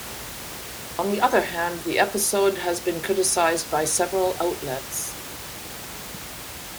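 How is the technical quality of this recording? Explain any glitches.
The recording shows no technical glitches, with only the room's own background noise sitting about 13 dB below the speech.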